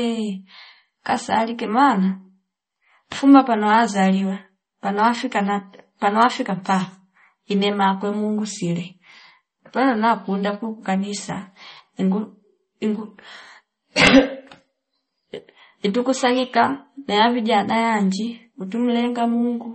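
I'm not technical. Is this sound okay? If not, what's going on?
No. Throughout the whole clip the speech carries plainly audible damage that points to MP3 compression, likely at a low data rate. Nothing is present above about 8.4 kHz, so s and t sounds lose their crispness and the voice sounds dull and muffled. With too little data to spend, the encoder also drops quieter detail that flickers in and out from moment to moment, giving the sound a watery, swirling quality.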